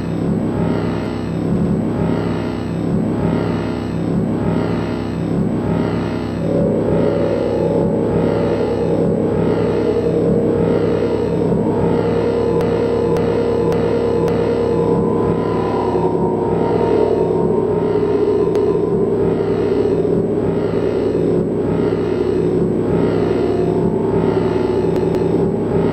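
At 1.56 s a block of about 93 ms plays twice more, and repeated frames recur at 12.61 s (a 557 ms block heard four extra times, adding 2.2 s), 18.56 s (279 ms, once more) and 24.96 s (186 ms, twice more). A run of compressed frames was duplicated, so the decoder replays the same slice, heard as a stutter. On a spectrogram or waveform, identical tiles repeat side by side.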